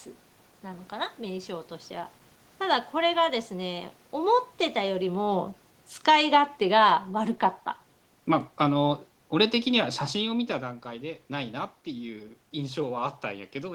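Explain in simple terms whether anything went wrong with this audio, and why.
Automatic gain falling, from 4.17 to 7.45 seconds: the recorder decided the speech was too loud and gradually turned itself down, so the voice and the room's background sink together.

Automatic gain rising, from 6.24 to 6.64 seconds: partway through, it briefly judged things too quiet and turned back up, so voice and background swell together for a moment.

The loudness changes near 4.5 and 10 seconds come from the talker moving relative to the microphone, not from the recorder.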